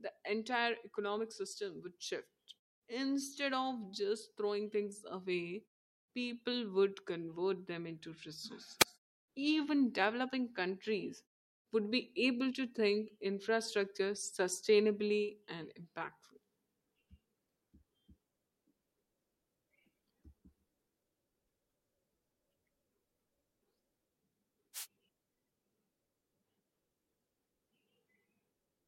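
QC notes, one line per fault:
8.79–8.84 s and 24.73–24.87 s, wireless microphone noise hit: two brief swishes of static break over the speech, the first about 50 ms long and the second about 130 ms. The radio link from the analogue FM microphone fades as reflected signals cancel at the receiver. As carrier strength drops, receiver noise rises through the audio for those moments.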